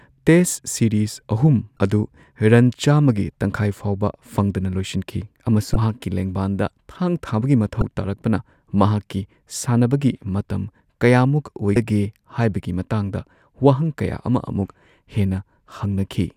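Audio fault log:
1.75–1.79 s, 5.72–5.76 s, 7.79–7.82 s (between "ꯊꯥꯡ ꯊꯥꯕꯒꯤ" and "ꯇꯥꯔꯛꯄꯅ ꯃꯍꯥꯛꯀꯤ") and 11.73–11.77 s: damaged data in a compressed stream. Each 32–34 ms blip cuts into the speech because corrupt frames knock the decoder out of sync until it locates the next valid header.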